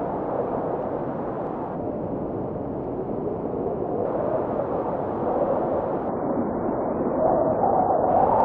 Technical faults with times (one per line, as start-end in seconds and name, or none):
0.39-8.40 clock slip clicks
1.75-4.05 section at the wrong speed
6.09-8.09 adaptive stream at a lower bitrate